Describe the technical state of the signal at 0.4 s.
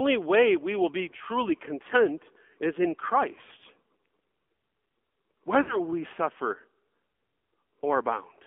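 At 0.4 s the speech is already running through the AMR narrowband mobile codec, which lasts the whole clip. The line band sits around 250 Hz to 3.4 kHz, and the vocal-tract model rebuilds the voice thinly, with a clearly buzzy, synthetic edge that points to a low mode around 7.4 kbps.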